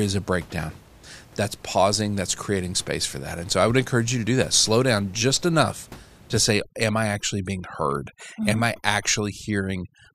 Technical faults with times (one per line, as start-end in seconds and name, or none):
6.38-10.15 overdone noise removal